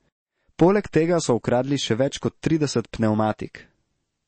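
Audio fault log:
Throughout: MP3 compression. The speech sounds watery and swirly, with chirpy, metallic sibilants and smeared consonant onsets, and nothing sounds above 8.3 kHz. The likely cause is an MP3 encoder short of bits, which fits a low rate near 32 kbps. It cut the treble at a fixed point and dropped weak frequency lines that flicker on and off between frames. A spectrogram shows a hard ceiling at 8.3 kHz and patchy, blocky holes below it.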